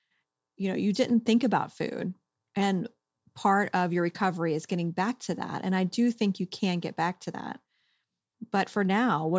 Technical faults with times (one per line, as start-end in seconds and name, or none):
none